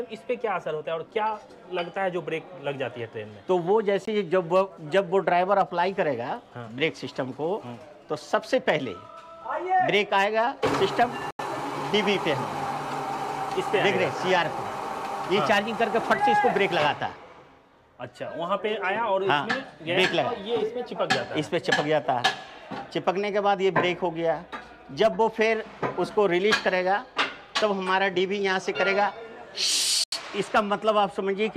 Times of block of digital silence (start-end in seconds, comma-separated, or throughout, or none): 4.05-4.07, 11.31-11.39, 30.04-30.12